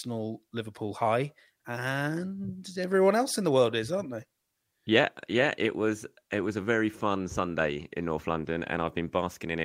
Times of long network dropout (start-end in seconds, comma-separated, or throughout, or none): none